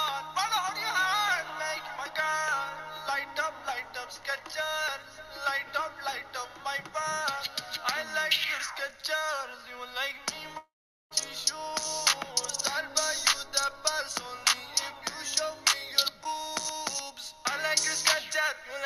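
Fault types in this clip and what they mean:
Long network dropout: from 10.57 to 11.13 s the sound decays into a fading buzz, then about 0.43 s of near silence, likely a network stall losing roughly 0.54 s, unlike brief glitches.
Chunks out of order: around 16.21 to 16.25 s a 10 ms chunk plays three chunks late, giving a jumbled instant; nothing goes missing, unlike a dropout.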